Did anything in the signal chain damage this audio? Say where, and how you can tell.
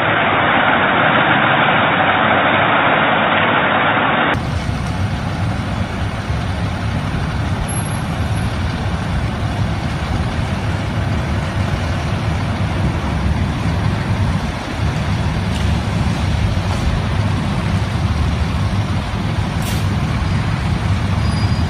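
Yes. Up to 4.34 s the spectrogram is empty above 3.8 kHz and has its own noise floor, roughly 50 dB down. Full bandwidth then returns with no gap, and the waveform steps in level by around 5 dB. This is likely an input switched to a poorer device, at the driver stage.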